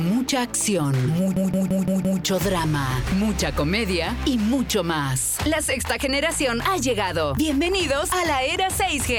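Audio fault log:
1.37–2.22 s system hang loop: the computer or its driver stalled while the sound hardware kept cycling its ring buffer, so one 171 ms slice of audio repeats five times at 5.86 Hz, a machine-gun stutter; the loop length fits an 8192-sample buffer.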